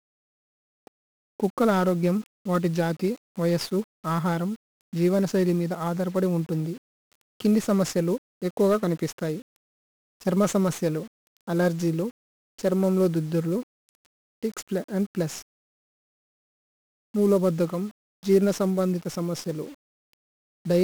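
From start to finish, the speech carries heavy 1-bit DFPWM compression damage. Each sample is reduced to a single up-or-down step. An adaptive level tracks the signal through those steps. The tracking error leaves dense broadband quantisation noise under every syllable. The result is fuzzy and crackly throughout. High frequencies drown in a constant hiss, so consonants lose their edge. The density of the grit fits a rate near 48 kbps.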